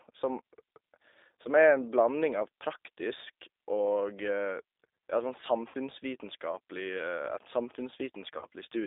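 From the first moment the speech carries the G.729 codec sound: it's squeezed into a band of roughly 300 Hz to 3.7 kHz, with nothing up top, and there's a plainly audible rough, slightly synthetic edge. That comes from the decoder rebuilding each 10 ms frame from a vocal tract filter, a pitch predictor and a handful of pulses, which fits the 8 kbit/s G.729A flavour.

At 5.68 to 5.75 s there's VoIP packet loss concealed by the speech codec. About 60 ms of audio went missing, which fits three 20 ms packets, and the decoder papered over the hole by stretching its last pitch and filter into a buzzy tone or coloured noise that sags in level. Because each frame leans on the one before, the sound stays a bit weak and smeared just after. It happens again at 8.38 to 8.46 s, this time covering about 40 ms, with the same fading fill and a short muddy recovery.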